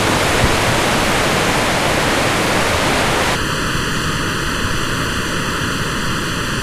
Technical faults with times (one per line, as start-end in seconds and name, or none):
3.35-6.62 channel delay (comb filtering)